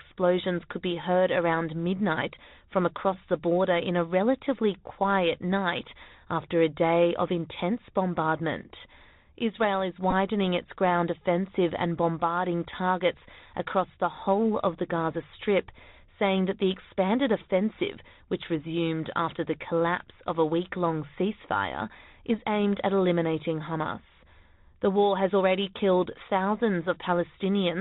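From start to finish the speech carries the sound of the Bluetooth CVSD headset codec, and the damage is plainly audible. Nothing above 4 kHz gets through, so the sound is thin and narrowband. The codec sends one bit per sample, saying only up or down, and its step size has to adapt. Loud, bright sounds outrun that step and distort. S sounds turn scratchy. A granular hiss sits under the speech. All of this fits a 64 kbps CVSD stream.

At 10.11 s there is a Bluetooth headset packet repeat. Voice packets between headset and phone were lost, and the chip decoded the previous packet's bits again. The gap lasts about 15 ms, which fits four repeated packets. Repeating every 3.75 ms, they form a very brief buzz near 267 Hz. Because the run is so short, it comes across as a quick buzzy blip rather than a sustained tone. Then good packets return.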